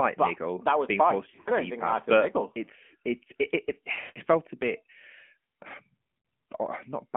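Throughout, the speech is thin and boxy, with nothing below about 200 Hz or above 3.4 kHz, and it carries a plainly audible buzzy, synthetic edge. This is the AMR narrowband mobile codec. The 8 kHz sampling removes the upper band, and the voice is rebuilt from a vocal-tract model driven by sparse pulses. That rebuilding causes the artificial grain, and its degree fits a mid-rate mode of around 10 kbps.

From 1.30 to 1.51 s the sound briefly dips and warbles in short stutters. These are lost AMR speech frames: about 120 ms of frames scattered over 160 ms, with the longest gap 60 ms. From 3.92 to 4.20 s a longer hole appears. The sound smears into a held, fading tone for up to 160 ms and then returns weak or rough. At 6.18 to 6.24 s a single 60 ms dropout gives a quick warble. In each case the decoder filled the gaps by repeating the last good pitch and vocal-tract settings at falling gain.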